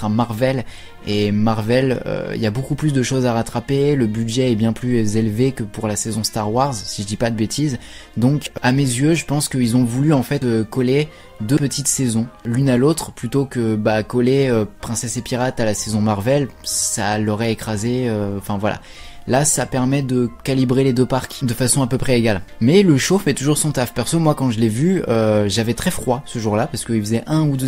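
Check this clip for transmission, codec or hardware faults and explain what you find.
Two skips of compressed frames, at 8.46 s and 10.42 s. Each time a couple of 32 ms frames never reach the output, so the audio jumps forward roughly 70 ms. Unlike a dropout there is no silent gap.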